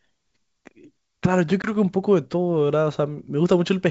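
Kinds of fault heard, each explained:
Packet loss on an ADPCM call: a hard-edged silent hole of about 20 ms, roughly one packet, at 1.62 s on the G.722 wideband line. Unlike a plain dropout, the sound returns distorted until the decoder's predictor and step size resynchronise, by 1.72 s.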